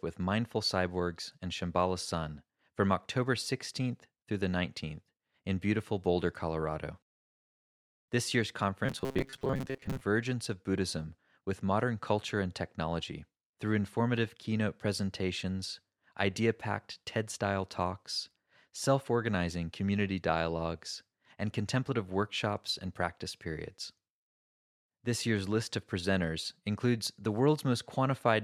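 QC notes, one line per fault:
8.86–10.01 s, robotic sound from repeated short buffers: speech becomes a rigid buzz at 134 Hz, likely because about half the time is filled by repeating segments of roughly 7.5 ms. On a spectrogram, bands appear every 134 Hz, and the waveform shows identical repeating cycles.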